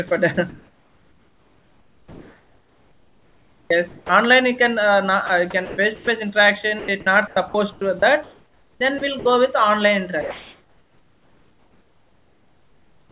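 From 0.08 to 4.09 s, then 5.26 to 6.07 s and 6.79 to 9.25 s, the speech gets chopped by the voice detector, likely flicking transmission on and off. Soft edges and quiet bits drop into flat comfort noise, roughly 3.5 s, 0.3 s and 1.1 s of it, so things sound choppy.

From 10.21 s to the end, comfort noise takes the place of the background. The real room noise, which sits about 38 dB under the loud parts, gives way to a smooth, featureless hiss, likely because the sender stopped transmitting during the pause. The level shifts by about 4 dB. Nothing reaches above 4 kHz anywhere in the clip, which fits a narrowband G.711-style call.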